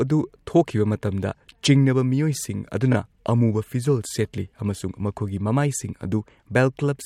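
At about 2.92 s, right before "ꯑꯃꯨꯕ ꯐꯤꯖꯣꯜ ꯁꯦꯠꯂꯤ ꯑꯃꯁꯨꯡ", there's a repeated frame: a 24 ms block plays twice, which fits one compressed frame duplicated, giving a quick stutter and adding 24 ms.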